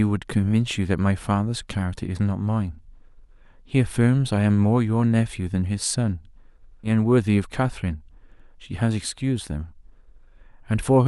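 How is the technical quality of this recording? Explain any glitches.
One glitch stands out in this speech recording. A stream segment skipped at 6.83 to 6.89 s: the audio jumps abruptly forward with a brief blip. This was likely a segment of the stream failing to load, with the player resuming from the next one and dropping a stretch of the programme.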